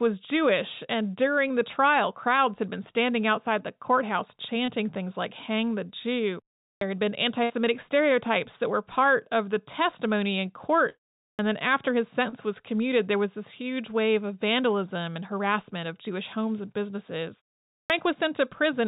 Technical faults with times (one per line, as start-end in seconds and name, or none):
4.66-4.70 short concealed packet loss
6.77-6.81 clipped start after a pause
7.44-7.52 burst of packet loss
10.90-11.07 long network dropout
11.35-11.39 clipped start after a pause
17.86-17.90 clipped start after a pause